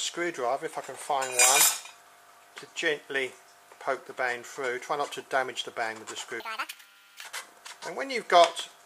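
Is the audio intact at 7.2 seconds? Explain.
No. From 6.40 to 7.25 s the sound races at double speed, an octave higher, because the audio was read two samples at a time.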